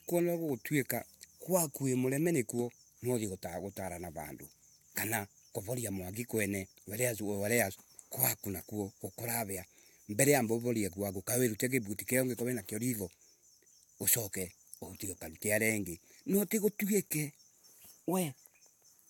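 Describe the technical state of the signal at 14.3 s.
At 14.3 s the speech signal is intact, with no audible fault at that moment.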